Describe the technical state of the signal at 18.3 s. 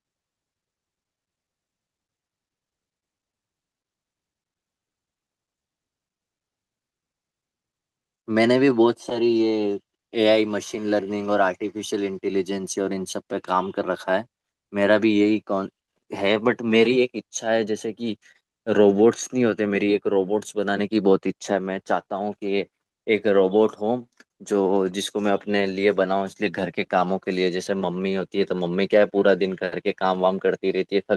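A short stall from a late packet occurs at 18.32 to 18.36 s. The jitter buffer ran empty, so the receiver held the last sound about 27 ms, then resumed with nothing lost. It is heard as a slightly stretched moment with a slight buzz or dip.

Repeated timing corrections run from 0.28 to 30.77 s, including this point. The receiver keeps repeating small slices, playing at about 97% speed and adding around 0.7 s overall, in small, unevenly spaced edits.

Clock drift between sender and receiver persists throughout. The sender's clock runs roughly 3% slow, so the buffer keeps draining, which causes the corrections.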